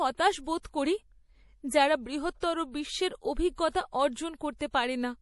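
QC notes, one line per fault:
throughout, MP3 compression: Speech sounds watery and swirly, with nothing above 11.5 kHz. Likely a low-bitrate MP3 encode, which fits roughly 48 kbps.
0.62–0.65 s, pre-echo: A short hiss of about 21 ms comes before a sharp attack. Block-wide codec noise fills the quiet gap, softening the onset.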